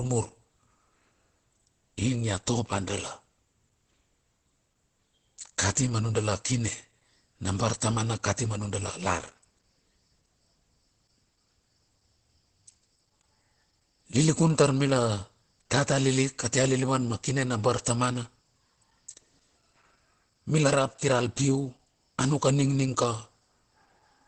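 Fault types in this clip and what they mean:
Opus compression: the speech is muffled and hoarse throughout, with nothing above about 8.2 kHz, likely from Opus in its speech mode near 12 kbps. Unlike MP3 there is less swirling, and unlike a plain low-pass, the voice texture itself turns rough.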